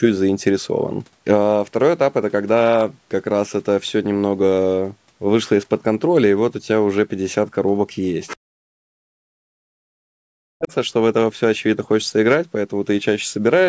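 From 8.27 to 8.37 s, a brief scrap of a second voice comes through beneath the speech, roughly 15 dB quieter. This is the other side's voice leaking through. The likely cause is a loudspeaker echo that the echo canceller failed to remove from the microphone.

From 8.36 to 10.71 s, the speech is suppressed in double talk. The talker's voice dips, falling by as much as 40 dB, for about two seconds in total. It likely happened because both sides spoke at once, and the canceller turned down the talker along with the echo.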